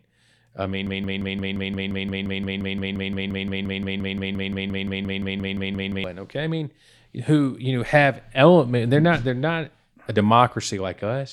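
From 0.87 s to 6.04 s the speech locks into a broken-record loop: a single 174 ms fragment repeats 30 times, identical each pass and butted end to end, until the clip resumes just before "okay I mean who". A stall in the player or stream likely left it resending its last buffered piece, so those five seconds of speech are lost. Unlike a stutter or echo, nothing decays or varies between repeats.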